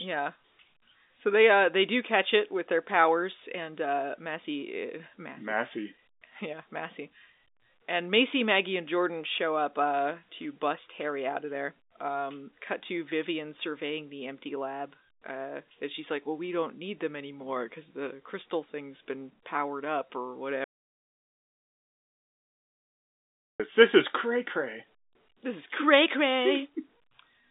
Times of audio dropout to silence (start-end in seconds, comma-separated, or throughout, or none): 20.64-23.60